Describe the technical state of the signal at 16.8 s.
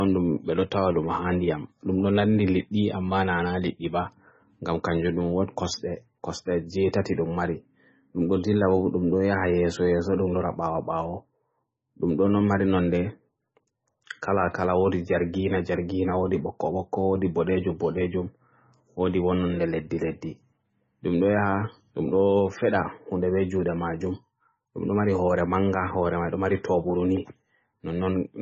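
At 16.8 s the speech carries heavy MP3 compression damage, likely the cause here. It runs through the whole clip, not just this moment. Nothing is present above 8 kHz, so the top end sounds dull and cut off. The encoder was starved of bits, which fits a very low rate near 17 kbps. Weak frequency lines drop in and out between frames. That gives a watery, swirly texture. Sibilants turn metallic and attacks smear.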